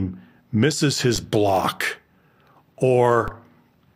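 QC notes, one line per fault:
1.16 s and 3.28 s, DC step: at each moment the waveform's zero line jumps abruptly by about -18 dBFS, and the speech carries on unchanged. The sudden offset shift is heard as a low thump or click. Each offset decays rather than holding, bleeding away the way a 20 Hz high-pass lets a step settle over roughly 8 ms. This keeps each thump short and dull rather than producing a lasting shift.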